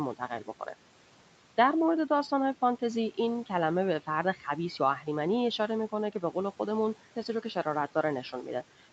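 Between 4.36 and 4.45 s the speech sounds swallowed, dipping by about 9 dB. This is speech cut by the noise suppressor, which mistook that stretch for background noise.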